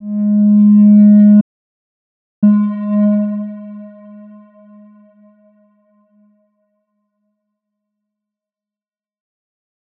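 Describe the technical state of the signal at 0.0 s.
At 0.0 s the signal is intact, with no fault present at that moment.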